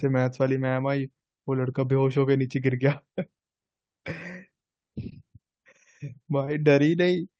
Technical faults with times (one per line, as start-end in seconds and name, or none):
5.09-5.13 short concealed packet loss
6.45-6.49 short concealed packet loss